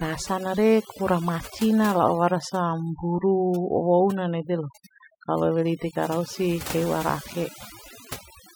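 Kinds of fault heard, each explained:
Overdone noise removal: Across the whole speech clip, the background drops and breaks up into twinkling, chirpy specks, and the voice loses its softer parts. A noise reducer pushed too hard is behind this. It switches individual frequency bands down or off whenever they sit close to its noise estimate, so leftover noise flickers in isolated bands while quieter voice detail is stripped out along with the noise.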